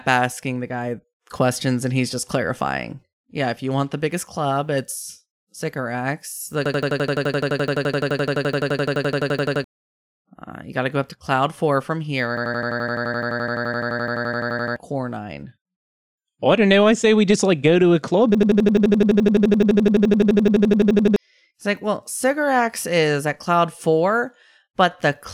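At 6.66–9.64 s, 12.37–14.76 s and 18.35–21.16 s, a system hang loop repeats one 85 ms slice of the speech at 11.7 Hz, a machine-gun stutter that fits a 4096-sample ring buffer, losing about 3, 2 and 3 seconds.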